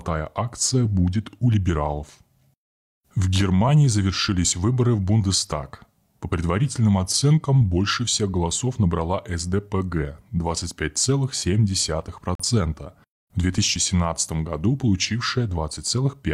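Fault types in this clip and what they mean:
Digital broadcast dropout: The receiver stopped getting valid frames and muted its output. The speech drops to silence at 12.35 s and returns at 12.44 s. About 43 ms of programme is gone, which points to a single lost frame. That material cannot be recovered.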